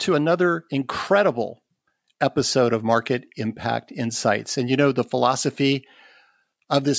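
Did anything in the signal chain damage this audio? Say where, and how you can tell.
No, nothing in the signal chain damaged this audio; the speech passed through call microphone processing, which trims the lowest bass and leaves nothing above 8 kHz, and that is normal behaviour.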